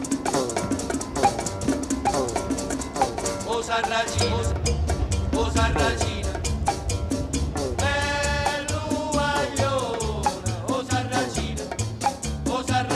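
From the very start until 4.52 s there's a doubled audio track: a second full-band copy trails the original by about 0.7 s, roughly 5 dB down, with no decay or room colour. It's likely a slower second capture path, and it drops out abruptly at 4.52 s.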